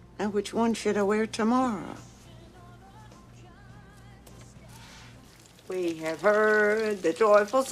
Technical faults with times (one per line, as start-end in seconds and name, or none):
1.64-1.66 corrupt frame decoded